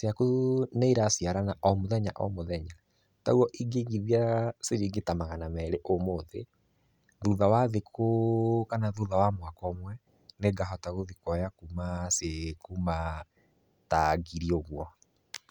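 No technical faults are audible anywhere in the speech recording.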